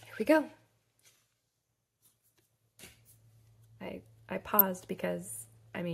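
DAB burbling runs from 4.39 to 4.61 s: weak reception let bit errors slip past error correction into the MP2 data, at roughly 0.2 percent, so corrupted samples put short blips of noise in single sub-bands and corrupted scale factors make sub-bands jump in level, across about a dozen frames.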